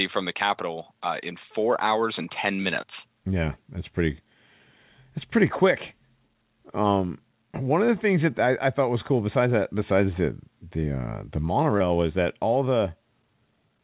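At 11.78 to 11.82 s, between "the the uh the" and "was that all", a short concealed packet loss briefly smears the narrowband (4 kHz-limited) sound, bridged by continuation rather than dropping to silence or clicking.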